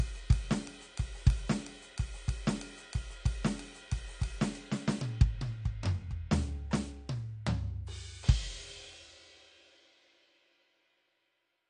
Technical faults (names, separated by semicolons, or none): AAC compression